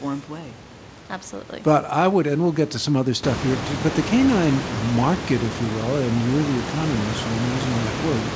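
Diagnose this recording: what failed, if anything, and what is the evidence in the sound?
Nothing failed, and the sound holds no evidence of any fault.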